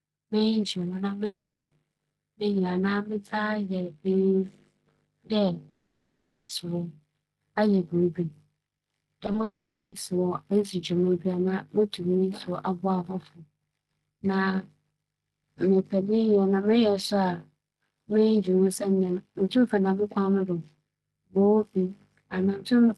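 At 1.25 s there's what sounds like a long network dropout, likely a stretch where no packets reached the receiver. About 0.46 s of audio goes missing up to 1.72 s. The last sound gets stretched into a short fading buzz, then it drops to silence for roughly 0.36 s before the audio picks up again with that chunk simply gone.

A second long network dropout, likely from the same kind of link stall, runs from 5.69 s to 6.50 s and loses about 0.8 s. This one never goes fully quiet. The concealment keeps smearing the last sound across the whole gap, so you hear a washy, droning fill instead of silence, and the audio resumes with the missing part skipped.

From 9.26 s to 9.43 s there's a burst of repeated packet loss, the robotic sound you get when holes keep landing close together. There are five small gaps, none longer than about 20 ms, and they add up to roughly a third of that stretch being patched over. 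The result is choppy, with pieces missing.

That burst runs straight into a third long network dropout, likely the connection stalling outright, from 9.43 s to 9.93 s. It loses about 0.49 s: a brief fading fill, then around 0.31 s of silence before the audio returns. Across all of it, the call codec's top end stops around 12 kHz, which fits Opus at about 32 kbps.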